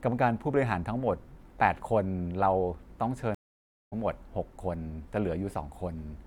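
At 3.35 s the connection dropped and the player reconnected, starting a fresh decoder partway through the stream, a stream reconnect. The speech cuts to 0.57 s of silence, then resumes at 3.93 s roughly 0.4 s further along, so a short stretch is skipped.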